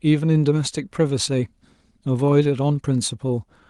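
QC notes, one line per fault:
Throughout: clock drift between sender and receiver. The sender's clock runs fast, by about four percent. Audio arrives a little quicker than this end plays it out. The jitter buffer keeps filling, so the receiver must throw away short pieces to keep the delay in check. The result is a faint unsteadiness in the speech timing rather than one clear break. The audio sits at 12 kHz bandwidth, consistent with an Opus call path.
0.29–3.69 s: repeated timing corrections. Small cuts recur across this span, all in the same direction and unevenly spaced. Each removes only a sliver of speech, so it comes across as a slight hiccup or a brief rushed moment. Together they make the speech play at about 104 percent of its natural pace. The rhythm sounds a touch hurried and uneven, as the receiver keeps trimming to stay in step.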